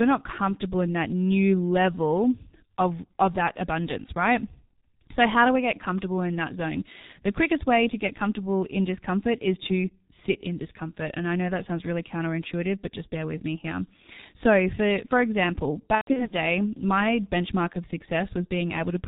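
Throughout the clip the speech carries heavy G.723.1 codec damage. Nothing passes above 4 kHz, and the slow-updating voice model in 30 ms frames leaves the voice muffled and hoarse with smeared consonants, which fits a rate of about 6 kbit/s.

From 15.95 to 16.34 s, between "for for example" and "my benchmark of", there is VoIP packet loss concealed by the speech codec. Gaps totalling 180 ms are scattered over 360 ms, the longest run lasting 120 ms, which points to about six lost 30 ms frames. The decoder fills them by extrapolating from its last pitch and filter, so the speech smears into a buzzy tone or coloured noise that fades, and stays weak briefly after packets resume.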